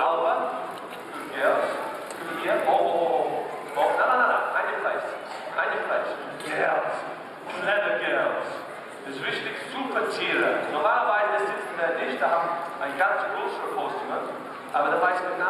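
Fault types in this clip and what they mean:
channel delay (comb filtering): one channel lags by a few samples, under a tenth of a millisecond, so the mono sum cancels around 7 kHz, sounding dull and hollow throughout.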